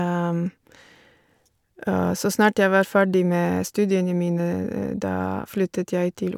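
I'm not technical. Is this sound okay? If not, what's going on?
Yes, no faults here.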